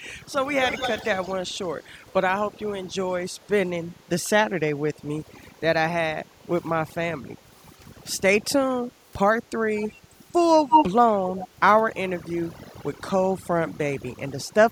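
Overdone noise removal runs through the whole speech clip. The noise reduction was set too hard. Frequency bands near the estimated noise floor are pushed down or cut out, and the quieter parts of the voice are cut with them. The background drops and breaks up into small twinkling specks.

An echo leak first appears from 0.63 to 1.33 s. A delayed copy of the voice trails it by about 184 ms, roughly 10 dB below it. It returns from 1.83 to 2.12 s, this time barely audible. Short scraps follow at 9.77 to 9.92 s and at 11.28 to 11.48 s, each about 15 dB quieter than the voice. From 10.69 to 10.85 s the echo is slightly louder than the voice itself. The likely cause is a far-end loudspeaker whose echo canceller let part of the signal back through.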